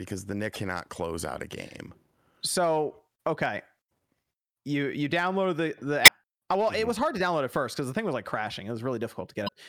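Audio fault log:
0.52–0.56 s, 3.88–3.90 s, 6.04–6.08 s and 9.45–9.49 s: damaged data in a compressed stream. Brief glitches break the speech, the first just before "close out a game", the third right after "you download the the". Corrupted frames make the decoder misread data and lose sync.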